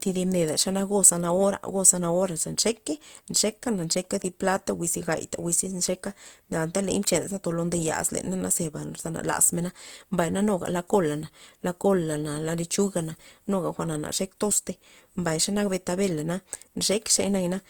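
From start to finish the speech sounds rough and grainy, with a noisy texture over it, though content reaches about 20.2 kHz. This is likely Opus compression in music mode, filling starved bands with folded or noise energy, which fits a 24 kbps bitrate.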